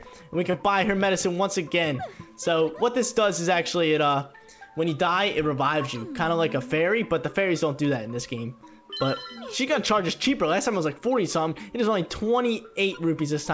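At 0.51 to 0.54 s there is a short concealed packet loss. About 20 ms of audio failed to reach the decoder in time, and the receiver bridged the gap with roughly 23 ms of sound extrapolated from what preceded it before blending back, heard as a brief smear, against a call-codec band that stops at 8 kHz.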